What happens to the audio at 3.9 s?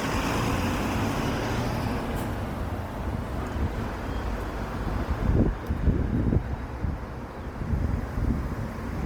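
At 3.9 s the sound carries the same Opus compression damage heard across the whole clip. Tonal parts turn rough, grainy and noisy rather than swirling or gurgling as with MP3, which points to Opus in its music (CELT) mode. Each band's energy is kept, and detail that no longer fits is likely rebuilt by folding lower bands or filling with noise. Full bandwidth remains, and the damage suggests a low rate near 24 kbps.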